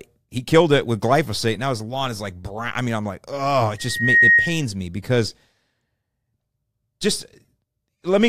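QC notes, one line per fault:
3.78–4.65 s, loudspeaker feedback squeal: after "I'm like oh it", a steady 1.9 kHz tone swells over roughly 0.4 s to about 10 dB above the speech, then stops before "me because". The microphone is re-amplifying its own loudspeaker, with loop gain above unity at that frequency.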